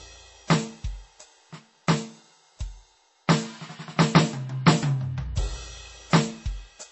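Right through this music there's a hard ceiling at 8 kHz and a watery swirl, likely MP3 compression at a bitrate around 32 kbps.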